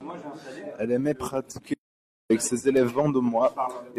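A speech recording with one audio dropout to silence. Just after "aimait pratiquer", at 1.74 s, the sound cuts off mid-flow. It returns at 2.30 s with "ses élèves". The gap lasts about 0.56 s. It is silent, with no room tone underneath. Whatever was spoken in that stretch is lost. The likely cause is a brief loss of input, such as a dropped link or momentary mute, while recording continued writing silence.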